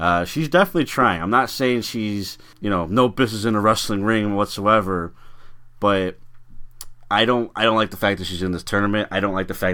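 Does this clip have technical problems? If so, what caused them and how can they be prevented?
No, nothing in this speech recording stood out as a technical problem on listening, so there is nothing here to trace to a cause or to prevent.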